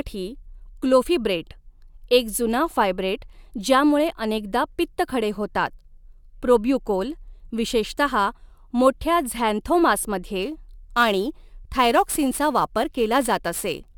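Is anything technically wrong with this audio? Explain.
Yes. From 10.42 s to the end at 13.98 s, a gritty hiss rides on the speech, strongest on loud and bright sounds and gone in the gaps. This is sample clock jitter: an unsteady converter clock, wandering by several microseconds, misplaces samples, leaving errors roughly 20 dB below the signal.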